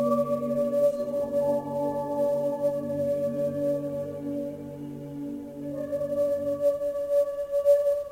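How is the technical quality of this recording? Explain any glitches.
The recording is compromised by one fault that runs through the whole music clip.

Sample clock jitter, present from start to finish: the converter's timing wanders by something on the order of 10 microseconds, so each sample lands slightly early or late. Where the waveform changes fastest, that timing slip becomes an amplitude error, here sitting about 30 dB below the music. It comes across as a grainy hiss riding on loud and bright passages, easing off as the music quiets.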